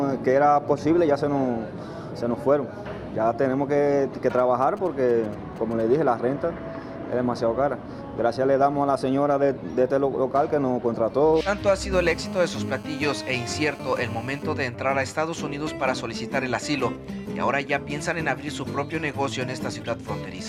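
From 4.30 to 5.82 s, GSM signalling bursts break in: a nearby 2G phone sends brief groups of radio pulses while signalling, which the audio circuit rectifies into a galloping dit-dit-dit of short 217 Hz buzzes, roughly 20 dB below the signal. A spectrogram shows short harmonic stacks in irregular groups.

From 11.93 to 14.43 s, GSM phone buzz appears as the phone holds a call, pulsing continuously at 217 Hz. The rectified bursts give a hard, raspy buzz about 20 dB below the signal, seen as unbroken horizontal lines at 217 Hz multiples and a regular comb of spikes on the waveform.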